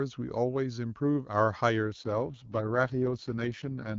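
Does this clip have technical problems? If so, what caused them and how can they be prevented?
Yes. From 1.86 s to the end there's an AMR rate drop: the speech turns rough and raspy, consistent with the HD Voice link falling from 23.85 to 6.6 kbit/s. Keeping the radio signal strong prevents it.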